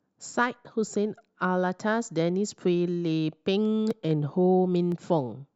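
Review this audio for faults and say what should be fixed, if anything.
Dropped samples at 0.87, 2.52, 3.91 and 4.92 s: four sharp clicks, likely from a fraction of a millisecond going missing, so the waveform jumps abruptly. To prevent this, give the capture or playback buffer more headroom so no samples are skipped under load.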